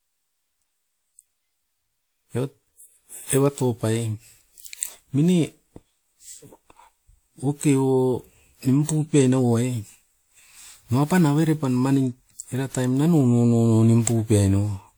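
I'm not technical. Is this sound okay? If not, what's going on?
No, not quite. The whole recording has what's called generation loss: the speech sounds swirly and a bit hollow, as if heard through a thin tube, and the starts of sounds are soft and smeared rather than crisp. That's likely because the file was squeezed into a compressed format, unpacked, and squeezed again, something like five times over. Each round leaves its own little smudges, and they pile up across the full clip.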